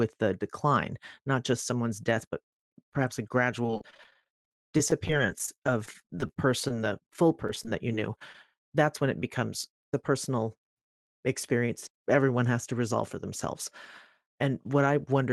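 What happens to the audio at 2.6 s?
Nothing goes wrong at 2.6 s: the speech carries on intact through the call path, with only the ordinary coding character and a top end that stops around 12 kHz.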